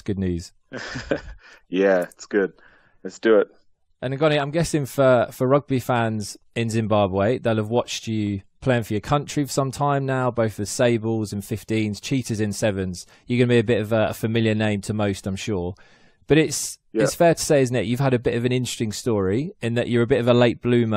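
No technical faults are audible anywhere in this recording.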